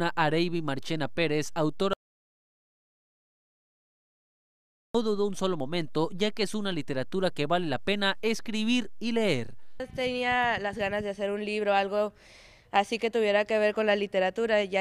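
At 1.93 s the audio cuts out abruptly and stays silent, with no room tone at all, until it resumes mid-flow at 4.95 s. This is an audio dropout to silence lasting about 3.0 s, likely a lost input while the recorder kept writing silence.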